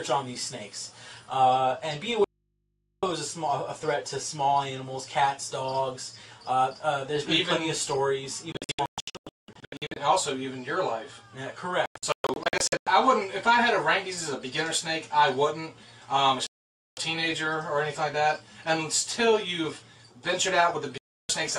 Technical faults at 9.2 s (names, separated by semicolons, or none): digital broadcast dropout